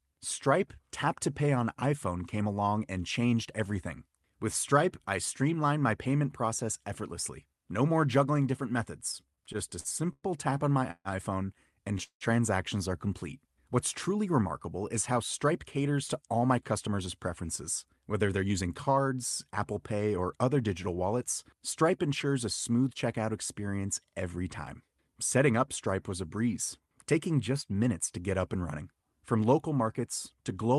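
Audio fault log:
9.03 to 10.26 s, repeated stalls (stutter): between "more juggling different" and "tap on my", packets kept reaching the receiver late, so its jitter buffer emptied ten times in just over a second. Each time the last sound was stretched to bridge the wait, about 0.24 s in all, the longest hold 0.10 s, roughly a fifth of the span. Nothing is lost, but the speech drags and stutters in small hitches.
10.91 to 11.08 s and 12.03 to 12.24 s, call audio freeze: after "tap on my", and again about a second later, delivery likely stalled in transit and the buffer ran dry. The receiver carried the last sound forward for 0.14 s and then 0.18 s, fading it to silence for the final 0.06 s and 0.10 s. The speech then resumes where it stopped, so each freeze inserts a gap and the delay grows by that much.
15.48 to 19.91 s, jitter buffer speed-up: after "truly remarkable is how", the buffer was holding more audio than it wanted, so the receiver cut tiny pitch-period slices over and over, removing about 0.3 s by "or other digital wallets". 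The speech plays about 6% fast with its pitch unchanged and sounds slightly hurried. The Opus call path beneath it keeps the audio band to about 12 kHz.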